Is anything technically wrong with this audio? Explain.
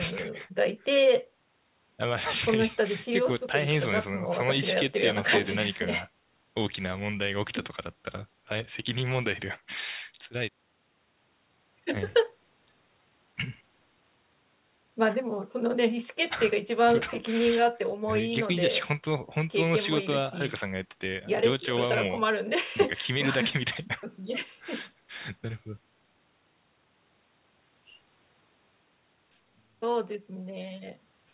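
No, nothing is technically wrong with this audio.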